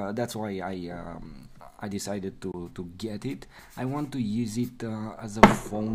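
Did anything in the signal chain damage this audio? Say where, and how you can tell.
Yes: a 20 ms silent hole from 2.52 to 2.54 s, with the sound resuming as if it had played on, likely a Bluetooth dropout, fitting one lost packet.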